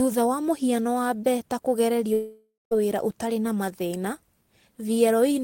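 A speech clip with one long gap. From 2.13 to 2.73 s, the last sound is stretched into a fading buzz, then about 190 ms of silence. When the speech resumes, roughly 580 ms is simply missing. The likely cause is a long network dropout.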